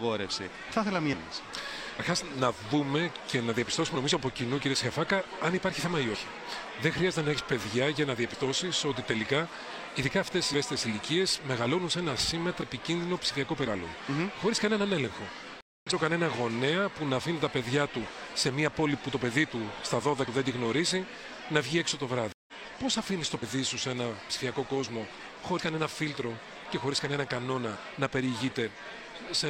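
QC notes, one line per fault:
15.61–15.87 s and 22.32–22.54 s, stream reconnect: the sound drops out for about 215 ms and then about 153 ms, and each time it comes back a little further along, skipping roughly 150 ms of material, with a soft, faded first moment. The connection broke, the player fell silent while it reconnected, then a fresh decoder picked up the live stream at a later point and eased in its first frames.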